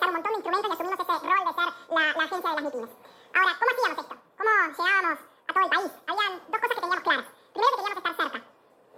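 From start to finish the audio has a wrong sample rate fault. It runs at twice its proper speed and a full octave higher, which fits material made at about 22 kHz being played at 44.1 kHz. Because tempo and pitch rise together, it is not a pitch shift or time-stretch.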